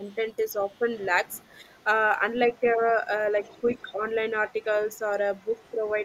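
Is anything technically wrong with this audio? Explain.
Yes. Two echo-cancellation faults recur.

Speech suppressed in double talk occurs from 0.0 to 0.83 s, 1.49 to 1.65 s and 3.41 to 4.03 s. The speech dips by roughly 10 dB in short stretches. The likely cause is an echo canceller that cannot separate the talker from the loudspeaker echo, so it turns both down.

The other side's voice is leaking through from 0.07 to 1.84 s, 2.51 to 2.72 s, 3.44 to 3.92 s and 4.5 to 5.94 s. A second, faint voice sits behind the speech, about 20 to 35 dB down. It is loudest near 3.4 to 3.9 s. This is likely uncancelled loudspeaker echo picked up by the microphone.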